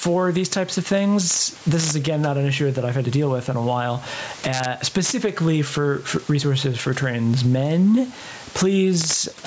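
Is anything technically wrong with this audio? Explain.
Yes, this speech has two faults.

Gain pumping runs through the whole clip. The gain swings by roughly 15 dB, which is likely caused by a fast limiter or compressor acting on an input gain set far too high. On a waveform, the loud parts look flattened.

Integer overflow occurs at 1.30–1.36 s just after "these types of", at 1.80–1.91 s just before "again not an issue", at 4.53–4.65 s after "with in a while", at 5.05–5.11 s, and at 9.01–9.16 s. At each point, peaks pushed about 2 to 4 dB past full scale and wrapped to the opposite sign. This produces harsh cracks. On a waveform, each one shows as sudden full-range jumps between the positive and negative rails, and on a spectrogram as bright vertical broadband streaks.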